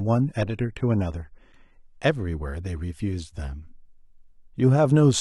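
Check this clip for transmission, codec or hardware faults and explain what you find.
One fault: an adaptive stream starting at a low bitrate. From 0.0 to 2.0 s the speech sounds dull and swirly, consistent with roughly 24 kbit/s AAC, then abruptly sharpens, consistent with about 96 kbit/s. The player began cheaply and stepped up after measuring throughput. Unlike a dropout or glitch, the change is seamless.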